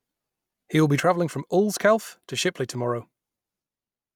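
At 1.00 s the speech drops abruptly by about 6 dB and stays there to the end, a sudden gain jump in which voice and background noise fall together. The likely cause is a digital gain setting applied instantly, without a ramp.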